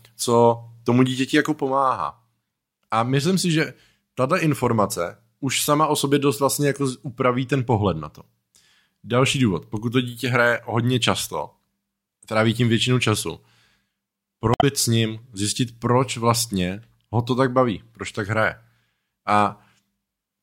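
Damaged data in a compressed stream breaks into this speech recording from 14.51 to 14.64 s, a brief disruption of about 0.12 s just before "s ním zjistit proč". Corrupted bytes in the encoded stream leave the decoder unable to read the affected frames, so it loses frame sync and scans forward for the next valid header. The speech then resumes.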